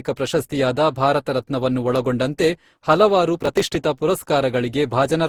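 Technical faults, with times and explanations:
throughout: generation loss. The speech sounds swirly, smeared and hollow, with blurred consonant attacks and a band-limit near 20.2 kHz. This fits repeated Opus coding at around 64 kbit/s, likely about ten passes, each requantising on a shifted frame grid.
3.38–3.75 s: processor overload crackle, just after "ಭಾರತ ರತ್ನವನ್ನು ಒಳಗೊಂಡಂತೆ ಹಲವಾರು". A gritty tearing rides on the speech as dozens of tiny buffers, which points to roughly 3 ms each, miss their deadline and are skipped, leaving hard-edged gaps until the load eases.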